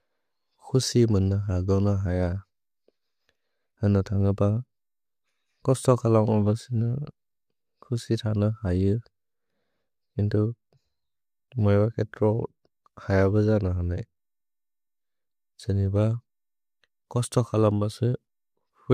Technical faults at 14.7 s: none

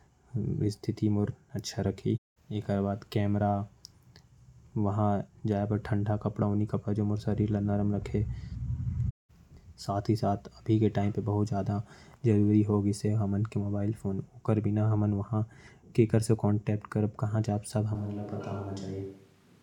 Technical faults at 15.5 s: none

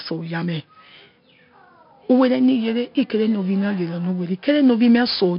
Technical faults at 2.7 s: 4-bit ADPCM compression

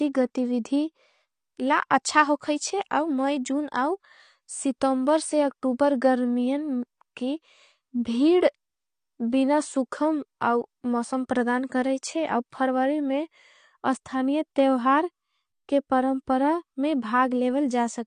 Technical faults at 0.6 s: AAC compression

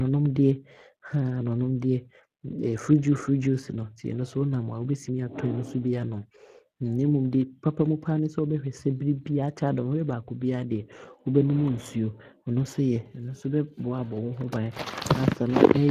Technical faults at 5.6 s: Speex codec

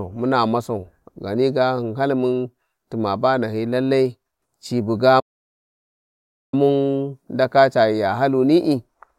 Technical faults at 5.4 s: playback stall

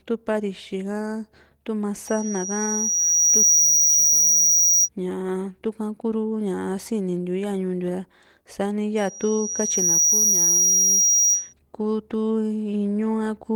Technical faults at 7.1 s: none

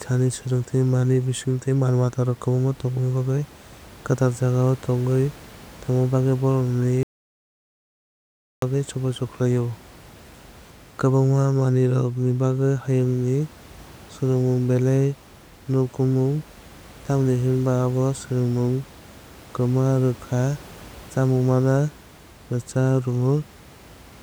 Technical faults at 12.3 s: none

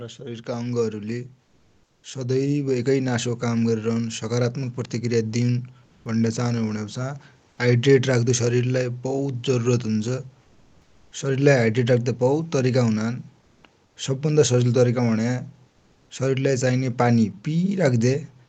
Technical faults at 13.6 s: comfort noise in place of the background

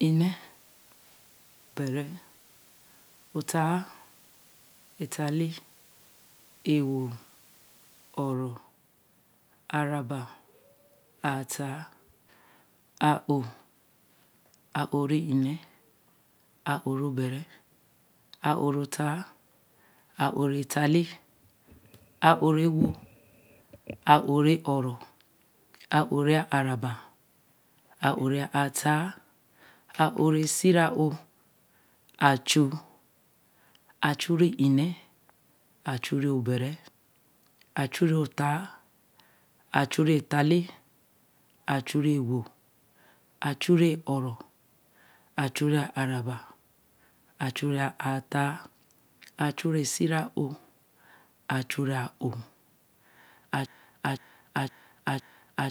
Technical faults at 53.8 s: broken-record loop

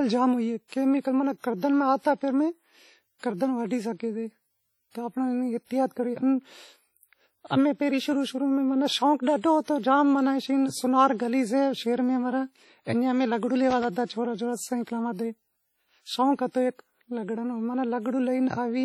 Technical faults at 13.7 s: WMA compression; loose connector crackle

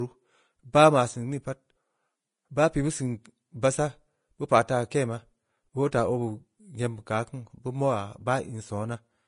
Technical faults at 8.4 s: Vorbis compression

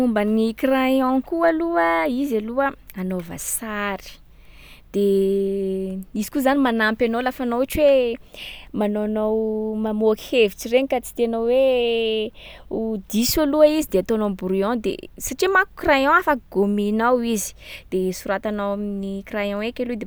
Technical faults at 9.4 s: none

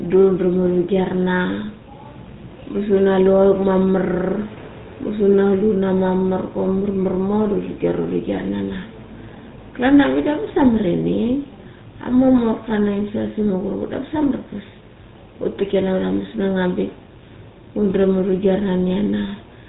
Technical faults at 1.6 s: GSM full-rate codec

